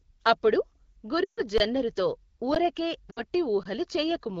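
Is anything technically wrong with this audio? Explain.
Yes, there are two kinds of fault: lost AMR speech frames and buffer underruns with a held sample.

Lost AMR speech frames occur at 1.24–1.42 s (140 ms) and 3.11–3.22 s (60 ms). Radio errors corrupted the frames, so the decoder repeated its last good pitch and vocal-tract settings at falling gain. The speech drops to near silence within two frames, and the voice comes back weak or rough for a moment. Unlike an underrun, the sound keeps moving rather than freezing.

Underruns with a held sample occur at 1.58–1.60 s (20 ms), 2.55 s and 3.63–3.65 s (20 ms). The output buffer ran dry, so the converter held its last value. The waveform goes flat and the sound stops abruptly with almost no click. Playback then resumes exactly where it stopped, with nothing skipped.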